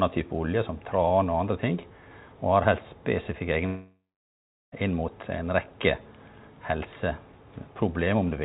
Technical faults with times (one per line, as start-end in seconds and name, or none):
3.66-4.74 long network dropout
6.83 dropped samples